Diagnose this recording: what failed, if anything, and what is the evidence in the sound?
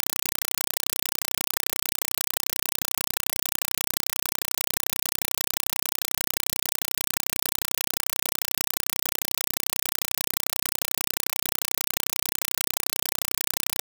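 Compressed stream played as audio, at playback: loud chattering static replaces the speech throughout, with 4 ms noise bursts repeating at 31.25 Hz, consistent with undecoded AC-3 frames.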